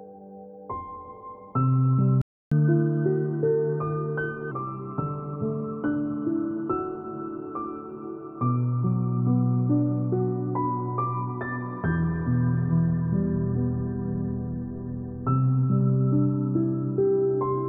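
The player most likely ran out of buffered data or had its output thread blocked, causing a playback stall: at 2.22 s the audio cuts to silence for 300 ms and resumes at 2.52 s. Catch-up at higher speed follows as the player resamples its backlog to regain that lost time. From 2.52 s to 4.51 s the sound runs at 1.15 times normal speed and sits roughly two semitones sharp, then drops back to normal tempo and pitch.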